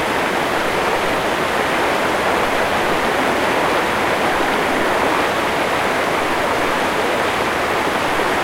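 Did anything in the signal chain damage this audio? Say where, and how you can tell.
Yes. The audio has a doubled audio track, most likely because the same material was captured a second time through a slower path or an edit left two copies out of step. Throughout the clip, every sound returns about a second and a half later at roughly the same level as the first. The repeat is full-band and dry, with no decay or room colouring, so it is a displaced copy rather than an acoustic echo.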